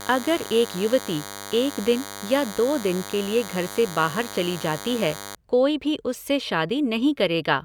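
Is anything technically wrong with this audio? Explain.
Yes. From 0.0 to 5.36 s the speech carries DECT cordless phone buzz. A nearby handset or base sends radio bursts every 10 ms, which the audio circuitry rectifies into a thin 100 Hz buzz with many harmonics, about 15 dB below the speech. A spectrogram would show evenly spaced horizontal lines at 100 Hz multiples, and the waveform regular spikes 10 ms apart.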